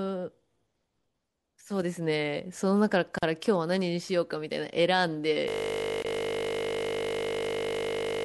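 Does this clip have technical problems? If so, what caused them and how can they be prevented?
Yes. The speech breaks twice into brief dropouts with smeared edges, at 3.18 to 3.23 s (about 42 ms) and at 6.02 to 6.05 s (about 25 ms), and the sound resumes exactly where it stopped. This is a gap at a join of encoded pieces: separately encoded segments were spliced without trimming, so each encoder's start-up delay and final-frame padding were left in as silence, slightly smeared by the codec. Prevent it by encoding the audio as one continuous stream, or by trimming encoder delay and padding before joining.

From 5.48 s to the end, the speech turns into a steady 50 Hz buzz, with one 20 ms fragment repeating exactly over and over. This is a system hang loop: the computer or its audio driver froze, and the sound hardware kept replaying the same small ring buffer instead of receiving new audio. 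A 20 ms loop fits a buffer of that length. Prevent it by fixing the driver or system stall and having the audio path mute its output when buffers stop refilling.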